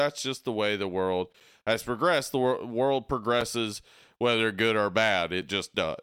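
At 1.40, 3.41 and 5.41 seconds, the speech drops out briefly. Each is a gap between chunks, about 6.5 ms long. The audio arrives in 2-second chunks. Silence sits between them. No sound is lost, only interrupted.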